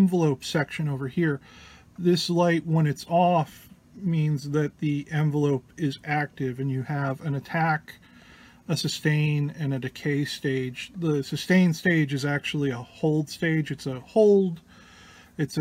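No technical fault can be heard anywhere in this audio. There is nothing here that needs a time or a cause attached to it.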